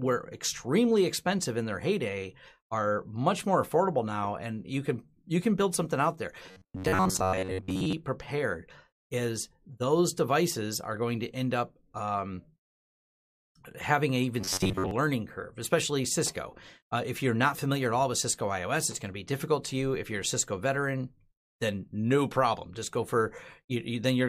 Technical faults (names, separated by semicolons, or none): robotic sound from repeated short buffers